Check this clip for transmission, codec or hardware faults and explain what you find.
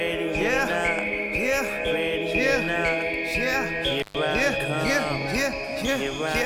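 One hardware fault: an intermittent contact at 4.00 to 4.17 s, where a loose connection opens for about 120 ms, crackling at both edges with faint hiss between, unlike a clean, silent digital dropout.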